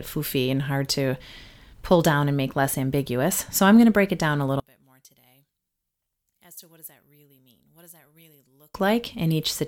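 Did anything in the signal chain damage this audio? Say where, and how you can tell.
Yes. From 4.60 to 8.75 s the speech drops about 28 dB, likely from one channel inverted in the analogue wiring, cancelling their shared content in the mono sum.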